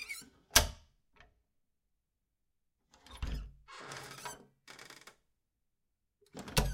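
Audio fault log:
No faults heard.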